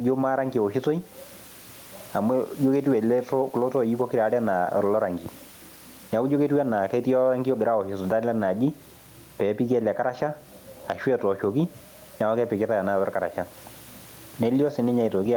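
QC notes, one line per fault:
Throughout, gain pumping: the level keeps breathing, a swing of around 10 dB. Likely the mic gain is set far too hot and a fast limiter or compressor is clamping every loud syllable, squashing loud and soft parts together. The room noise sits about 36 dB under the speech.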